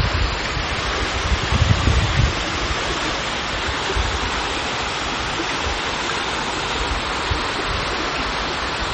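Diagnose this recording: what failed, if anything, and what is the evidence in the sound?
The codec stage is where this fails. Across the whole clip the audio has a hard ceiling with nothing above 8.3 kHz, and the damage is plainly audible: a watery, swirling texture, metallic chirps on bright transients, and attacks that smear. This is likely MP3 compression at a starved bitrate, which fits roughly 32 kbps. The encoder chops the treble at a fixed frequency and zeroes weak spectral lines that then flicker on and off between frames.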